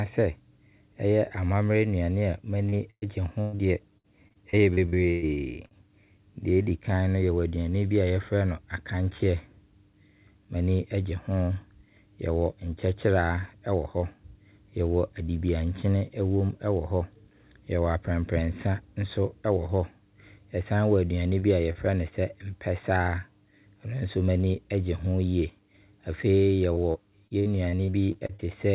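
Just after "ɛyɛ amammerɛ nnuane", at 2.69–2.75 s, a short concealed packet loss occurs. About 30 ms of audio never reached the decoder in time, and the receiver bridged the hole by extending the preceding sound before blending back. It is heard as a brief smear in the speech. The same fault returns at 21.40–21.46 s and 21.73–21.78 s, each again roughly 30 ms patched over, giving small smears or wobbles. A fourth instance, at 3.56–3.62 s, is covered below.

At 2.90–3.05 s, right before "gye ho deɛ", a burst of packet loss removes about 120 ms. The receiver continued the last sound and faded it out, so the final 60 ms falls to silence before the speech picks up later, with that stretch missing. A second burst at 3.41–3.56 s also loses about 120 ms, but the patch carries through the whole gap without going silent. It runs straight into the short concealed loss at 3.56–3.62 s, adding roughly another 30 ms of fill.

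After "gye ho deɛ", between 3.98 and 5.74 s, repeated packet loss produces robotic sound. Nine separate gaps, totalling about 390 ms and up to 117 ms each, were patched one after another, so about a fifth of the span is synthetic. The result is choppy speech with fragments missing. It recurs at 26.73–28.42 s, with twelve shorter gaps of up to 61 ms, about 360 ms in all.

Throughout, the audio has nothing above 4 kHz, which fits a narrowband call codec such as G.711 A-law.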